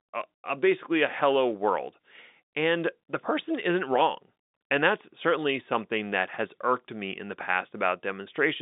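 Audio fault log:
Nothing stood out on listening, with the speech carrying the usual narrow band of a G.711 telephone line and no event worth logging.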